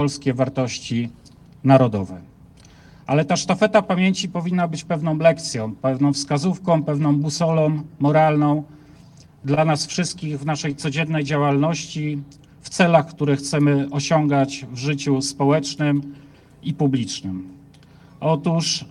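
From 9.26 to 10.22 s the audio suffers repeated stalls (stutter): packets arrived late, so the jitter buffer ran dry six times. The receiver extended the preceding sound across each gap, 82 ms in all, longest 28 ms, so nothing is lost but the sound hitches.

Between 10.69 and 11.54 s a jitter buffer slow-down follows as the receiver rebuilds its reserve, repeating single pitch periods to insert 61 ms. The audio plays at 94% speed with unchanged pitch, so sounds are slightly drawn out.

At 13.59 to 13.89 s a jitter buffer speed-up trims surplus buffered audio, cutting out short pitch-period segments totalling around 40 ms. Playback runs at 112% speed at the same pitch, giving a brief hurried quality.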